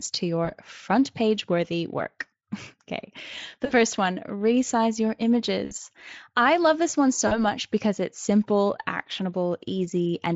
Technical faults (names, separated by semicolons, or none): VoIP packet loss concealed by the speech codec